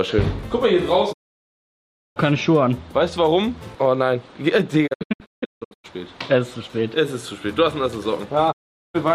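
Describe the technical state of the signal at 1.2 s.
At 1.2 s the signal is silent, inside a digital broadcast dropout from 1.12 to 2.18 s. The receiver muted after a 20 ms fade, losing about one second of programme.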